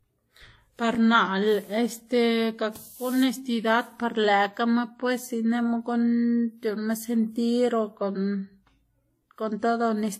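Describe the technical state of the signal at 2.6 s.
At 2.6 s the speech shows transcoding between lossy codecs, which runs through the whole clip. The audio was likely encoded twice, first in a format resembling WMA at a moderate bitrate and then in Vorbis at a lower one. The second encoder spends bits on the first one's artefacts and adds its own. The sound has both codecs' artefacts heard together, and nothing is present above 15.9 kHz.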